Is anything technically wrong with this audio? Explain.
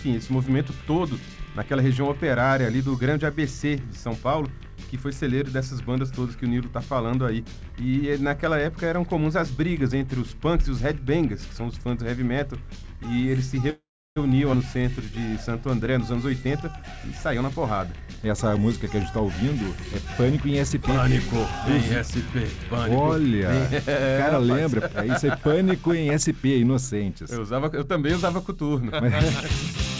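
Yes. Four playback-timing faults are audible over a band-limited call path, with nothing above 8 kHz, which fits a wideband call codec such as G.722 at 64 kbps.

Call audio freeze, 13.70 to 14.18 s: the sound is held as a decaying continuation of its last moment, then drops to silence for roughly the final 0.33 s. This is likely a jitter buffer running dry while packets were delayed. Playback resumes where it stopped, so about 0.46 s of gap is inserted and nothing is lost.

Skip ahead, 14.52 to 14.55 s: playback jumps forward with only a 10 ms join. Roughly 0.15 s of audio is missing, and the material either side is spliced almost directly.

Jitter buffer slow-down, 14.78 to 15.71 s: the receiver repeated single pitch periods and pause fragments to rebuild its reserve, adding 56 ms. The audio runs at 95% speed without any pitch change, so sounds are slightly drawn out and may carry a faint warble.

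Jitter buffer speed-up, 15.84 to 21.09 s: with too much audio queued, the buffer repeatedly trimmed short pitch-period pieces, removing about 0.3 s in total. Playback runs at 106% with pitch unchanged, giving a hurried, compressed feel across those five seconds.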